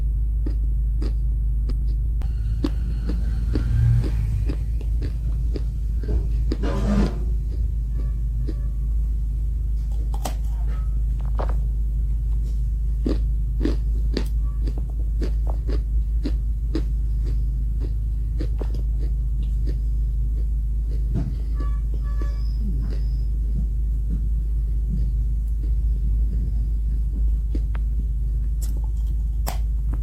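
At 1.71 s there is a skip ahead: about 0.4 s of audio was discarded, and the sound jumps forward with no silence or fill, unlike a dropout. From 1.82 to 6.50 s a jitter buffer speed-up removes tiny pitch-period slices, about a tenth of a second in total. The sound runs 2% faster without the pitch rise a resampling error would cause.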